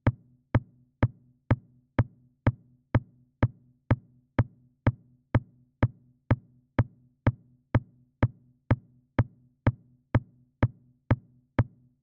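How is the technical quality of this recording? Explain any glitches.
No glitches or technical faults can be heard anywhere in the recording, and the signal stays steady and intact throughout.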